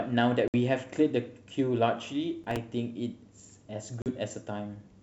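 At 0.48 s, packet loss on an ADPCM call cuts a hard-edged 60 ms hole into the speech. Because ADPCM codes differences, the receiver's predictor and step size lose track of the sender's. The speech returns slightly distorted, settling within tens of milliseconds.

From 2.44 to 2.57 s, processor overload crackle tears through the sound. A handful of buffers of around 5 ms miss their deadlines and replay old audio. Their hard edges join into a gritty burst that stops once the load clears.

At 4.02 s, a second packet loss removes 40 ms and produces the same short, slightly distorted recovery. The surrounding wideband G.722 audio carries its faint upper-band hiss.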